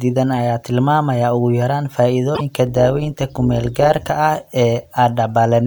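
A broken MP3 bit reservoir, at 2.34 to 2.41 s just after "ayaa tilmaamaya ugu yaraan", is likely from dropped 26.1 ms frames whose following frame reads the wrong borrowed bytes, causing a skip-ahead glitch. Overlap-add ripple from 2.67 to 4.11 s comes from mismatched frame overlaps, making the level rise and fall by about 6 dB roughly 150 times a second, heard as a metallic buzz on the speech.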